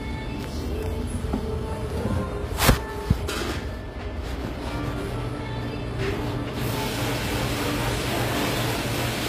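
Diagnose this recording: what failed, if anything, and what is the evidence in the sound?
The failure is at the codec stage, in the form of HE-AAC compression. Codec damage is plainly audible throughout: the treble is bright but gritty and metallic, because spectral band replication copies lower bands upward instead of coding them, so upper harmonics don't line up with the real ones. On a spectrogram, the top looks like smeared, repeated copies of lower bands and stops dead at 15.5 kHz. This is likely HE-AAC v2 at a low bitrate, around 24 kbps.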